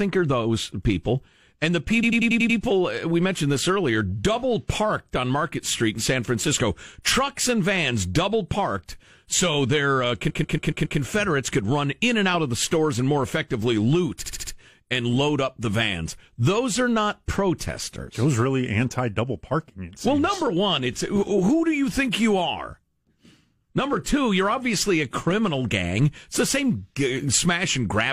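Repeated frames: the decoder replayed short runs of compressed frames, so the speech stutters, looping 93 ms blocks from 2.02 to 2.58 s, 139 ms from 10.29 to 10.99 s, and 70 ms from 14.24 to 14.51 s.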